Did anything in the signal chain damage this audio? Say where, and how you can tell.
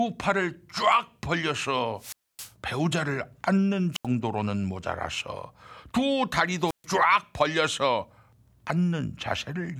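Yes: a wireless microphone squelch dropout in the radio link, where weak RF muted the receiver. Hiss then near-silence occurs at 1.97–2.54, 3.92–4.06 and 6.66–6.85 s.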